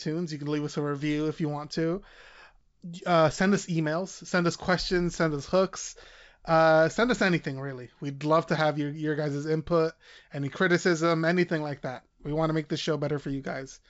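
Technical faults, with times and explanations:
No technical faults can be heard in the speech. The G.722 wideband telephone coding at 64 kbit/s leaves at most a faint trace, with nothing above 7.7 kHz.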